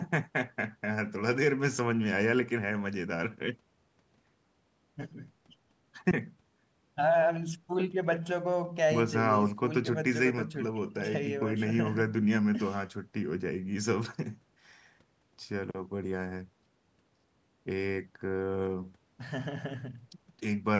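No technical faults can be heard anywhere in this speech. It has passed through a call's microphone processing, which trims away the lowest bass and leaves nothing above 8 kHz, as that path normally does.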